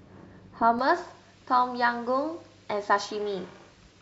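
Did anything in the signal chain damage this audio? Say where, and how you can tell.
Yes: pre-emphasis left on, with de-emphasis skipped at playback. From 0.79 s the speech turns thin and sibilant, about 11 dB hot at 10 kHz. It is a smooth J.17-like tilt, not added hiss.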